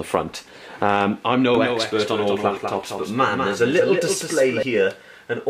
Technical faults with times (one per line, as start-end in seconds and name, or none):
1.55-4.63 doubled audio track